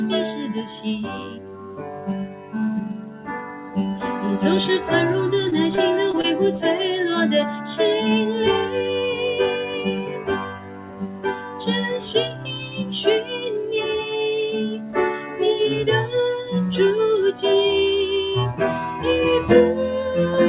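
From start to finish, a noise suppressor built for speech works on this audio, which has nothing above 4 kHz. It treats held tones and tails as noise. Their level swings by about 10 dB. Attacks get through. The sustained parts pump and thin out.

Sound is cut by the noise suppressor from 1.04 to 2.08 s, 2.26 to 2.55 s, and 2.93 to 3.76 s. Each dips by about 9 dB. Held sound sinks and decays end early.

From 5.50 to 6.25 s there is repeated packet loss. Four brief holes, the longest about 21 ms, are patched by extending the last sound. The result is choppy, with small pieces missing.

The suppressor cuts again from 10.05 to 11.62 s, by about 9 dB. Shorter dips of about 5 dB fall at 12.29 to 12.47 s and 12.64 to 12.92 s. Two more, of about 6 dB, come at 14.78 to 14.96 s and 15.17 to 15.40 s.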